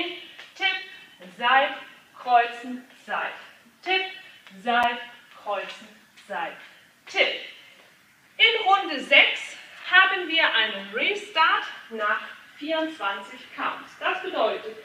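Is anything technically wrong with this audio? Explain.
Yes. At 4.83 s and 9.84 s there is a gap between chunks: the audio arrives in 5-second blocks, and each join leaves a 6.5 ms hard-edged silence, visible as a thin flat notch in the waveform and a vertical blank stripe across the spectrogram.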